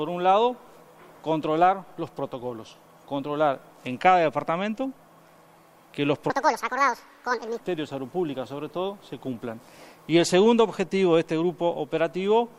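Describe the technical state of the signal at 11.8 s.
At 11.8 s the signal is intact, with no dropout, click, distortion or other fault at that point.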